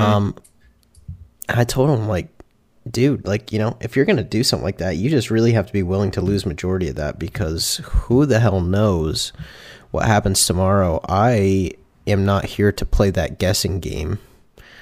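Nothing in this recording stands out as a technical fault.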